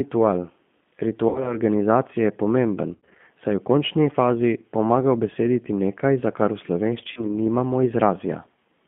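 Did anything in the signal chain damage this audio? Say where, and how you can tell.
Yes. At the codec stage, G.729 coding at 8 kbit/s limits the line to about 150 Hz–3.5 kHz and rebuilds speech from a filter and sparse pulses, so it sounds rough and synthetic throughout.

On the network, VoIP packet loss concealed by the speech codec occurs at 1.29–1.56 s, 2.95–3.21 s (between "je pomemben" and "saj v končni fazi") and 7.12–7.26 s. The decoder stretches its last frames into a fading buzzy tone or coloured noise, and the speech stays weak until recovery.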